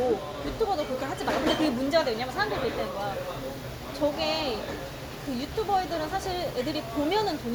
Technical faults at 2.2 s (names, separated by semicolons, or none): none